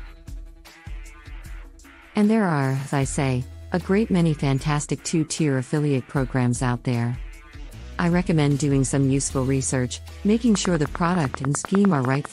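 From 10.55 to 12.26 s a steady ticking runs over the sound: around twenty sharp, near-identical pops at an even 10 per second, standing well above the audio level. This train of clicks is likely interference from nearby equipment or a faulty connection or power supply injecting repeated pulses.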